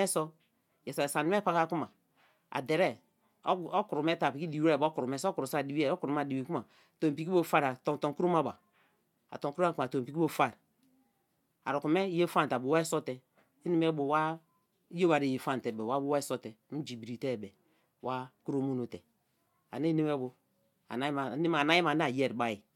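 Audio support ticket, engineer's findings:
No audible faults found in the speech clip; no dropouts, glitches or level anomalies detected, nothing to escalate.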